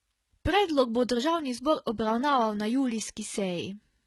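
From start to finish the speech carries heavy damage of the kind left by HE-AAC compression, likely at a very low bitrate around 16 kbps. The treble is synthesised from copied lower bands, so it sounds bright but mismatched, with s sounds turning gritty and lispy.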